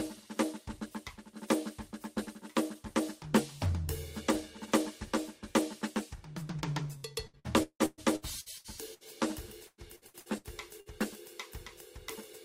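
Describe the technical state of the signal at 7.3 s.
At 7.3 s the music turns choppy, with chunks dropping out. This is repeated packet loss (robotic sound) running from 6.97 to 9.04 s: nine gaps, the longest 170 ms, each patched by stretching the preceding audio, so roughly a third of that stretch is concealed.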